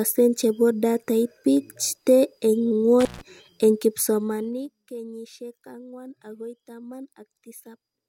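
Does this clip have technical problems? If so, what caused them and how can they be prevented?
Yes. From 3.00 to 3.21 s there is an intermittent contact: a loose plug or cable opens for about 137 ms, so the speech drops out with crackle at both edges and faint hiss in the gap. A waveform shows a near-flat stretch bracketed by sharp spikes. Securing connectors and replacing worn cables prevents it.

From 4.04 to 4.84 s there is zipper noise. The level falls by around 20 dB in unsmoothed 1 dB steps, about twenty per second, and each step ticks audibly. On a spectrogram these appear as thin vertical broadband lines, and the waveform envelope looks like a staircase. Interpolating gain changes per sample prevents it.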